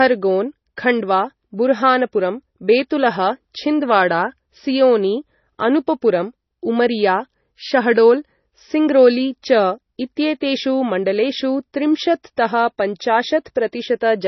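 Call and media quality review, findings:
Speech sounds watery and swirly throughout, with a hard treble ceiling around 5.9 kHz and smeared consonant attacks. Probably MP3 compression, likely a starved encoder cutting the top band and dropping weak lines frame to frame. Heavy damage fits roughly 24 kbps.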